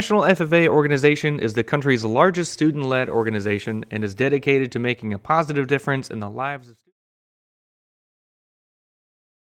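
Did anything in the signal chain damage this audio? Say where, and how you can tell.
No, the speech signal shows no damage from any stage of the chain, and the only level change is a smooth fade out, as an editor would apply it, that begins around 6 s and reaches silence at 6.93 s without a click or hard edge.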